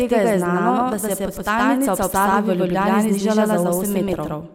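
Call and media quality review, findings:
Doubled audio track, throughout: a full-band second copy of the speech at about equal level, trailing by roughly a tenth of a second, dry, no decay. Likely a second capture path or an edit stacking two copies out of alignment.

DAB burbling, 2.31–2.36 s: brief blips of noise in single sub-bands over the speech. Points to residual bit errors in the MP2 stream corrupting samples across several frames. Weak DAB reception.

DAB burbling, 4.08–4.14 s: same sub-band noise blips, slightly milder, consistent with a few frames hit at a lower error rate. Same receiver/decoder path.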